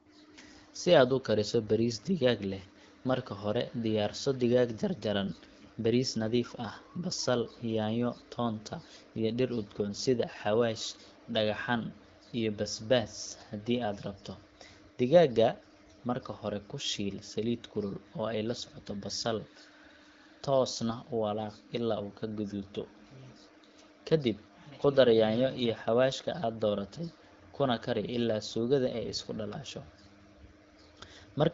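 Nothing faulty is audible anywhere in this speech.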